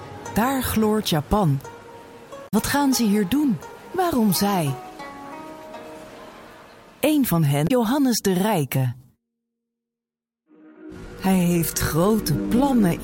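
Two short bursts of damaged data in a compressed stream interrupt the audio. The first runs from 2.44 to 2.54 s and the second from 7.64 to 7.71 s. Each is heard as a brief chirp or blip. Corrupted bytes in the stream stop the decoder from reading those frames. It loses sync and skips ahead to the next valid frame header. From 8.72 s to the end the pace abruptly drops to about 0.7 times normal speed while the pitch stays the same. This is likely a time-stretched section, where software lengthened the audio by repeating short slices to fill a longer span.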